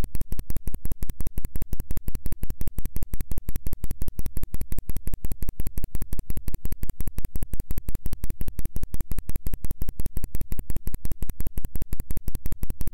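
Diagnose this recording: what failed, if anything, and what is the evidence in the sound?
Nothing in this recording of everyday sounds points to a failure at any stage of the chain, from capture through conversion, transmission, storage and playback, so there is no fault to diagnose.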